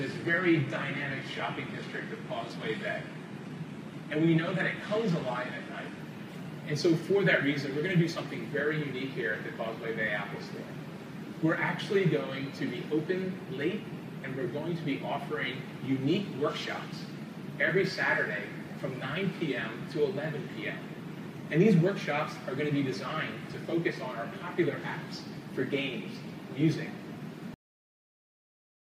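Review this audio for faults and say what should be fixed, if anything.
The first 6.0 s sound like an adaptive stream starting at a low bitrate: nothing above 12.3 kHz, with thin, synthetic-sounding treble and heavier codec artefacts. Then quality jumps suddenly, with no gap, to what sounds like a much higher-bitrate stream. To prevent it, start playback on a mid-tier rendition or briefly probe bandwidth first.

There's a cut-off end at 27.54 s, where the audio stops mid-sound and drops straight to silence with no decay, because the last buffers never got written out. To prevent it, flush and drain all pending buffers before closing the output.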